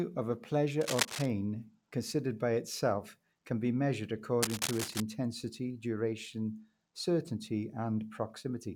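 From 0.81 to 1.27 s, and again from 4.43 to 5.02 s, a dense, uneven scratching rides over the speech. The first burst is roughly as loud as the speech and the second is a little quieter. This is cable scratch noise, likely from a worn cable or connector whose contact resistance jumps as it moves. It differs from clicks or crackle because it comes in sustained rustling bursts, not isolated impulses.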